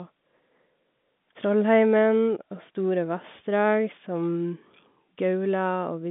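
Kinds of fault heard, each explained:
Nothing here needs a line of its own: the speech simply comes down an ordinary G.711 A-law phone line at 64 kbps, with the familiar narrow telephone band and nothing reaching past about 3.8 kHz.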